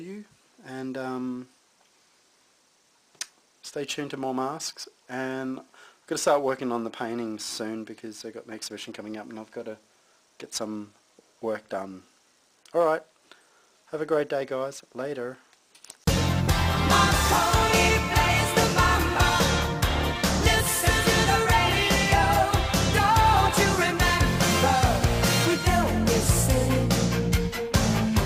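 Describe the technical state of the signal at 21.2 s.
The signal at 21.2 s is intact, with no audible fault at that point.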